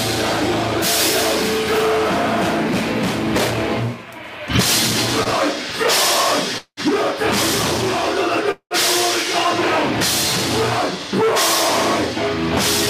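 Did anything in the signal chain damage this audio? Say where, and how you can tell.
Yes. At the network and jitter-buffer stage there is a short stall from a late packet at 5.23 to 5.28 s: the sound is held for about 21 ms, then resumes where it left off. Nothing is skipped, which distinguishes it from packet loss concealment.

The two call audio freezes, at 6.58 to 6.80 s and 8.51 to 8.74 s, are longer. The last sound stretches into a fading buzz and reaches about 80 and 90 ms of silence, adding roughly 190 ms each time. That points to late packets likely emptying the buffer, not missing audio.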